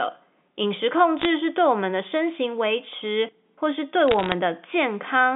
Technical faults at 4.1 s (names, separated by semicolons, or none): bit errors on a digital phone line